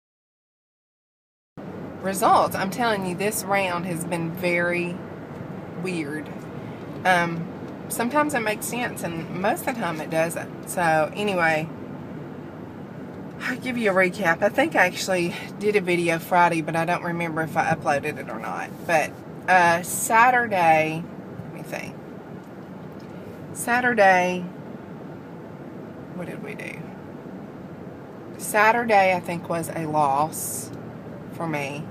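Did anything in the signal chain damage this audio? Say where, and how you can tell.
Yes. Capture or recording began late, a cut-off start at the buffer or storage stage: the file holds digital silence from 0 to 1.58 s, then the sound enters mid-event at 1.58 s with no natural attack or fade-in, because everything before that point was never written.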